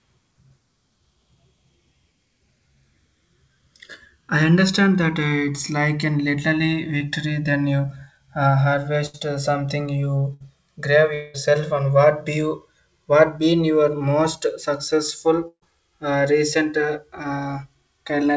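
Throughout the clip the channels are drifting apart. The two sides appear to run on separate clocks, off by roughly 150 ppm, so the inter-channel delay slides to around 3 ms by the end. In mono the comb notches sweep slowly, heard as slow flanging.

From 6.98 to 7.02 s there is a short concealed packet loss. About 20 ms of audio never arrived, and the receiver bridged it with roughly 23 ms of extrapolated sound before blending back. It registers as a brief smear or wobble.

At 9.06 to 9.16 s and 10.34 to 10.42 s, a burst of packet loss removes about 80 ms and 60 ms respectively. In each, the decoder extends the last sound and lets it decay, producing a short held buzz or fading hiss, then resumes with the intervening audio gone.

From 11.14 to 11.36 s, about 200 ms of audio is missing. A decaying continuation covers the whole span, with no silence, before normal audio returns further on. 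The cause is likely a long network dropout.

At 15.48 to 15.64 s, another burst of packet loss removes about 140 ms. Concealment fades out and leaves about 70 ms of silence before playback resumes.

Across the clip, the G.722 call path at 64 kbps carries nothing above 8 kHz.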